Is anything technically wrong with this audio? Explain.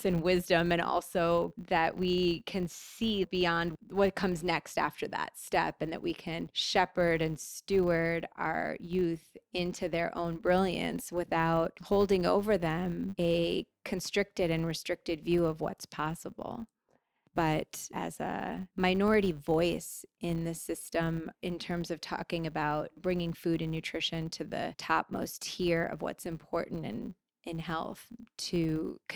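Yes. One fault runs through the whole speech clip: the filter is restarted on every block. The filter loses its stored state at each block boundary and starts from silence. Each block therefore opens with a small transient. These transients repeat at 100 Hz, which fits blocks 10 ms long. The result is a steady 100 Hz buzz laid under the speech. It rises and falls with the level of the voice.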